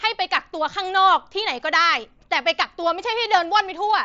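No technical faults occur in this speech clip; it comes through a Bluetooth mSBC headset link, with nothing above about 7.7 kHz.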